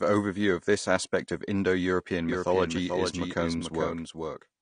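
AAC compression runs through the whole clip: the speech is dull and smeared, with nothing above 9.9 kHz and a fizzy, warbling edge on sibilants. This is likely AAC-LC coding at a low bitrate, consistent with about 32 kbps, dropping and coarsening high bands.

A doubled audio track appears from 2.29 s to the end: a second full-band copy of the speech, about 5 dB quieter, trails roughly 0.4 s behind with no reverb tail, starting abruptly. It likely comes from a slower second capture path mixed in.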